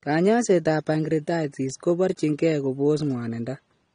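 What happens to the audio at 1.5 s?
At 1.5 s the speech is dull and smeared, as it is across the whole clip. Nothing is heard above about 9.7 kHz. Sibilants and sustained sounds have a warbling, fizzy texture. This is likely AAC compression, of the AAC-LC kind. The codec splits each frame into frequency lines and quantises them coarsely against a hearing model. It cuts the top band and leaves gaps in the spectrum. The damage is plainly audible and fits a low bitrate near 32 kbps.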